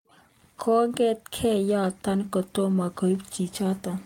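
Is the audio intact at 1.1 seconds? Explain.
Yes, the speech at 1.1 seconds plays through intact, with no dropout, click, distortion or other fault at that point.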